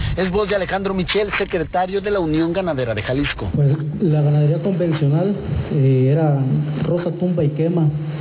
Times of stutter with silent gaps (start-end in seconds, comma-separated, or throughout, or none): none